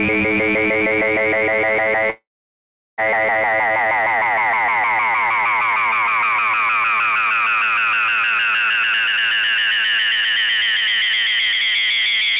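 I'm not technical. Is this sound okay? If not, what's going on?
No. From 2.1 to 3.0 s there's a call audio freeze: delayed network data likely left the receiver with nothing to play. The sound trails off into silence, then resumes where it stopped. From 8.76 to 11.74 s there's a jitter buffer speed-up: the receiver trimmed about 0.7 seconds of backlog, so the sound runs about 22% faster and hurried, at unchanged pitch.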